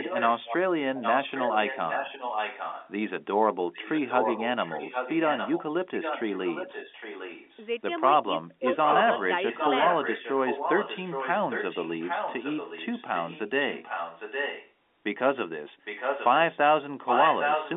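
From the very start there's an echo leak: a delayed copy of the speech trailing about 0.81 s behind, sitting roughly 5 to 10 dB under the main talker. It's present at 0.0–0.57 s, 0.95–2.92 s, 3.73–7.64 s, 8.85–14.72 s, 15.85–16.6 s and 17.06 s to the end. Likely the far end's loudspeaker feeding its mic past an incomplete echo canceller.

Between 8.23 and 8.64 s you get speech suppressed in double talk. The talker dips by up to about 25 dB in short pieces, around 150 ms in total, likely as the canceller mistakes overlapping speech for echo and ducks it.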